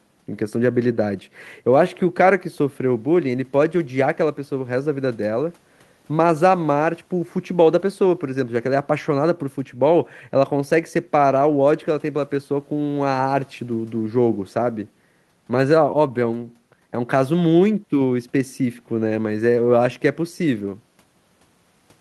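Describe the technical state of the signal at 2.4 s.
At 2.4 s the speech signal is intact, with no dropout, distortion, or other fault audible at that point.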